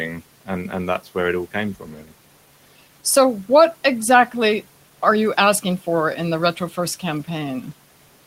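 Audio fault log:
1.80–2.13 s, speech cut by the noise suppressor: part of the speech was taken for noise and turned down by up to about 11 dB, so roughly 300 ms sounds swallowed and faint. The waveform envelope dips, and the spectrogram shows speech energy thinning toward the noise floor.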